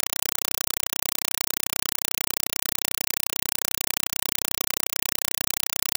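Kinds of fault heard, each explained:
compressed stream played as audio: The sound points to an undecoded Dolby Digital stream being treated as ordinary samples. Each data frame plays as a 4 ms burst of noise, then silent padding. Bursts repeat 31.25 times a second. Loud, chattering static replaces the speech throughout.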